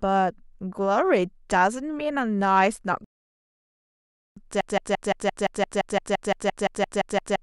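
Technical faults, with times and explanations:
3.04–4.37 s: rebuffering stall. The speech cuts to silence for about 1.32 s and then picks up at exactly the point where it stopped. This is the behaviour of a player that has exhausted its downloaded audio and pauses until more data arrives. No speech is skipped. The gap simply inserts dead time into the timeline, which is why the resumed sound continues seamlessly from the cut.
4.61 s to end: broken-record loop. A fragment of about 172 ms repeats back to back, 16 times, until the clip finishes. Identical repeats with no variation point to a stalled player, encoder or stream that kept re-sending the last buffer it held. That is the likely cause here. Whatever speech should have filled these final 2.8 seconds is lost, replaced by the stuttering repetition.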